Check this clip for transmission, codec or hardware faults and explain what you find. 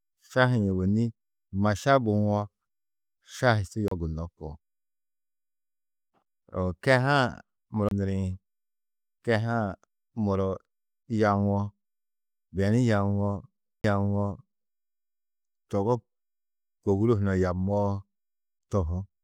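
Three CD skips interrupt the speech. CD skip, at 3.88 to 3.91 s (right after "šahi su"), 7.89 to 7.91 s and 13.81 to 13.84 s: a jolt or disc flaw throws the laser onto another turn of the spiral, so playback mutes for roughly 30 ms with a tick, then resumes from a displaced point.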